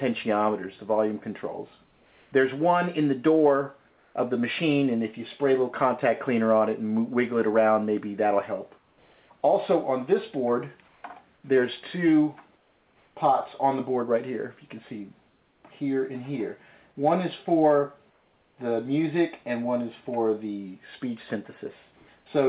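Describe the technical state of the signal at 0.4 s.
At 0.4 s the audio is intact: no fault occurs at that moment, and what the call path adds is its usual coding noise and a band limit, with nothing above 4 kHz, which fits G.711 A-law coding at 64 kbps.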